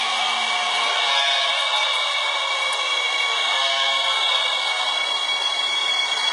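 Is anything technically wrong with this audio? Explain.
Yes, heavy HE-AAC compression runs throughout: the treble is likely rebuilt from copied lower bands, sounding gritty and metallic, nothing above 11.1 kHz, which fits roughly 12 kbps.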